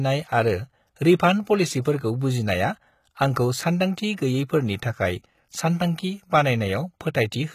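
The whole clip has gritty, metallic treble that doesn't quite match the body of the speech, and nothing above about 14.9 kHz. That sounds like HE-AAC compression, likely at a low bitrate around 20 kbps, rebuilding the top end from copied lower bands so the harmonics don't line up.

At 1.82 to 1.85 s there's pre-echo, a short hiss smeared about 35 ms ahead of a sharp attack, softening it. The codec spread its noise across the whole block, including the quiet bit before the transient. It happens again, shorter, around 4.16 s, about 18 ms.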